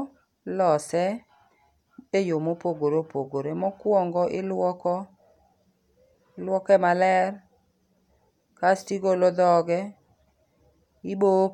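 A short speech recording with nothing technically wrong to point out anywhere in it.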